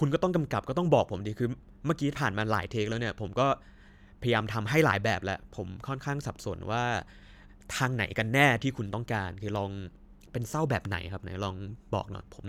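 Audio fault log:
No faults are logged for this clip.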